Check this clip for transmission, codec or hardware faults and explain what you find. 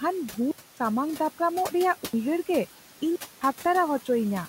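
Two faults are audible: noise suppressor artifacts running through the whole clip, and three blocks of digital silence.

The noise suppressor artifacts last from start to finish. The suppressor is pulling down the bands it judges to be steady noise by about 11 dB, recalculating every frame. The room noise, which sits about 16 dB below the speech, therefore dips in the pauses and swells back under the speech. On a spectrogram the background floor looks mottled and pumping, not an even haze.

The blocks of digital silence fall at 0.51 to 0.77 s (256 ms), 2.05 to 2.13 s (85 ms) and 3.16 to 3.41 s (256 ms). In each, the output was replaced by zeros, as when the output buffer isn't filled in time. The middle gap fits a 4096-sample block at 48 kHz. Each one is heard as an abrupt hole. The waveform drops to a flat line with no fade, and the spectrogram shows a clean black vertical band.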